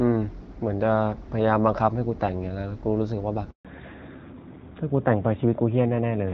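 At 3.51 s the speech cuts out for 140 ms, a handover gap: the call was moved between networks and no speech frames arrived during the switch. It fades within a few tens of milliseconds into clean silence, not the buzzy smearing of concealed packet loss.

From 3.65 s, when the speech resumes, there is a fallback to narrowband. The HD Voice link, whose light coding sounds like AMR-WB at 12.65 kbit/s, gives way to narrowband AMR at 12.2 kbit/s. Nothing above 4 kHz survives, so the voice turns duller and rougher. Unlike a simple low-pass filter, it changes abruptly right after the gap.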